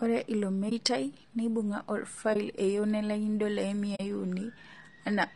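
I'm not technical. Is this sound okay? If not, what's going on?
No. The speech was most likely squeezed through low-delay AAC compression, the kind video calls use, which works in very short slices and can't capture a voice's detail well. Throughout the clip the voice sounds rough and grainy, with a hiss-like fuzz and a dull, artificial top end.

There is also AAC frame loss with muting: small chunks of audio never arrived, and the player filled them with silence. You hear brief soft-edged dropouts at about 0.69 s, 2.33 s and 3.95 s. The first two are about 20 ms long, and the last is about 40 ms.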